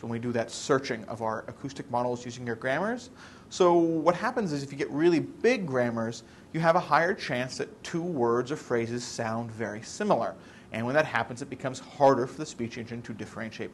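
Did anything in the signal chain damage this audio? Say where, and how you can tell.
No, nothing in the signal chain left an audible mark on this audio. Listening across the whole clip turns up no event at any stage that would point to damage.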